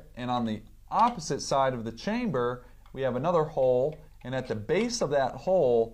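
No dropouts, clipping, glitches or other playback faults can be heard anywhere in the audio.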